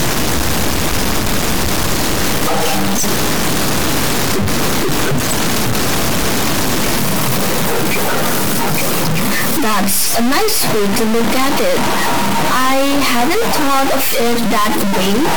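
A stuck bit runs through the whole speech recording, from start to finish. The likely cause is a single data line or converter bit held fixed at 0 or 1, so roughly half the samples land off by that bit's weight, a step of about -10 dBFS. Because a bit this high carries so much weight, the result is a harsh, buzzy distortion over the speech, and the pauses fill with loud noise.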